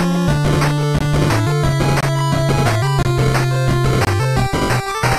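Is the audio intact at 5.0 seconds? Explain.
Yes, at 5.0 seconds the audio plays through cleanly with no dropout, click, distortion or other fault.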